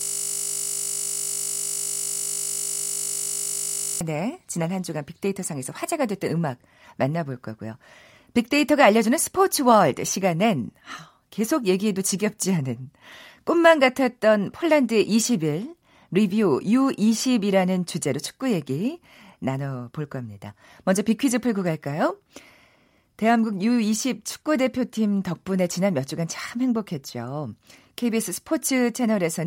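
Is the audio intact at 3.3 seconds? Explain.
No. At 3.3 s the clip is inside a system hang loop that is already under way when the audio begins and lasts until 4.01 s. The system or driver has frozen while the sound hardware keeps replaying the same 20 ms stretch of its buffer, about 200 times over. Because the repeated piece is so short, it repeats 50 times a second and fuses into a steady 50 Hz buzz in place of the speech.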